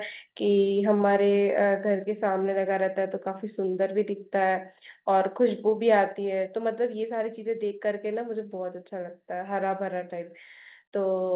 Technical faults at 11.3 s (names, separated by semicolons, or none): none